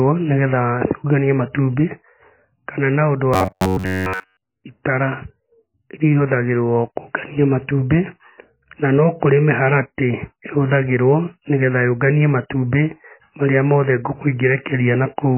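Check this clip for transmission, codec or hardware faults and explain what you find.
Two problems in this speech clip. Throughout, MP3 compression is the likely cause: the heavy, watery smearing suggests a very low bitrate around 18 kbps. From 3.34 to 4.44 s, right after "kana na ũndũ", there's robotic sound from repeated short buffers: a rigid metallic buzz at 93.8 Hz, likely from a roughly 10.7 ms buffer looping through most of that stretch.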